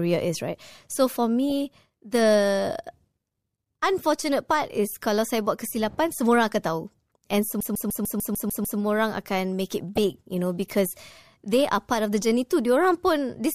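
Speech, carrying two kinds of fault. DAB burbling appears from 1.50 to 1.84 s and again from 9.96 to 9.98 s: uncorrected bit errors, roughly 0.15 percent, corrupt MP2 samples and scale factors, so individual sub-bands jump in level frame by frame. From 7.61 to 8.79 s the audio is a CD stuck on one turn, with a 0.15 s segment repeating eight times, each return marked by a brief mute, as the laser skips back to the same point on every rotation.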